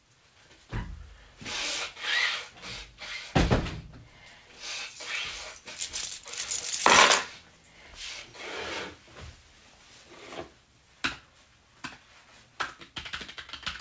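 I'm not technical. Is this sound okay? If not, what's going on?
Yes, nothing is wrong here.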